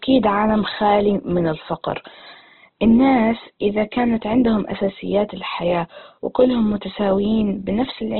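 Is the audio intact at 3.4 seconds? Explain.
No. At 3.4 seconds the speech carries the same damage heard throughout the clip, most likely Opus compression. Nothing survives above about 4.1 kHz, so the sound is narrowband and muffled. The roughness and graininess come from the music-mode encoder keeping each band's energy but filling starved bands with folded or noise-like content. That texture and bandwidth suggest a very low bitrate, around 12 kbps.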